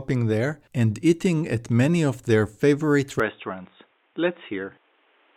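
From 3.20 s the speech abruptly dulls. The spectrogram goes empty above 3.8 kHz and the waveform shrinks by about 5 dB, likely from an input switched to a poorer device.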